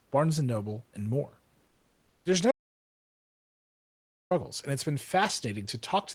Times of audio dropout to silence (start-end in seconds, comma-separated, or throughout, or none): 2.51-4.31